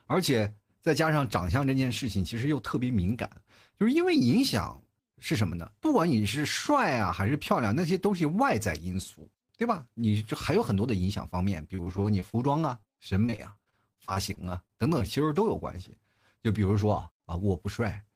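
A speech recording with two stretches of repeated packet loss (robotic sound), at 11.75–12.35 s and 13.26–15.02 s. In each, many holes, the longest 28 ms and 41 ms, are patched by extending the preceding sound, covering about a quarter and a fifth of the span. That gives choppy speech with pieces missing over a sustained stretch rather than one isolated blemish. Separately, short concealed packet loss occurs twice back to back, at 12.81–12.85 s and 12.85–12.88 s. Each is about 20 ms of missing audio, filled in and blended back, so it sounds like a brief smear or wobble, not a run of robotic chop. Between 16.84 and 17.36 s a jitter buffer speed-up trims pitch-period slices, roughly 50 ms in all. The speech runs about 7% faster at an unchanged pitch, sounding slightly hurried but without dropouts or metallic colouring.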